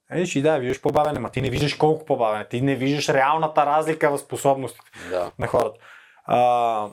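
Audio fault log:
0.70–1.61 s, processor overload crackle: right after "и да", the speech turns gritty and torn, with a dense burst of crackle riding on it. The processor missed dozens of deadlines on very short buffers, a few milliseconds each, and each late buffer was simply skipped, leaving hard-edged gaps.
5.23–5.62 s, processor overload crackle: a shorter burst of the same tearing crackle. A smaller run of missed buffer deadlines drops brief slices of audio, and the sharp edges at each skip make the crackle until the load eases.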